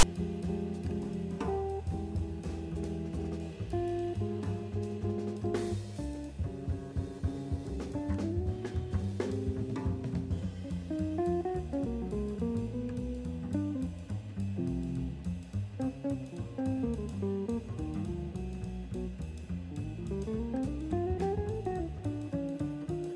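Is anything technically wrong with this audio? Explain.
Yes. File tags played as audio, 0 to 0.03 s: a block of text metadata is decoded as samples, producing a brief, loud, one-sided rasp of static with abrupt edges.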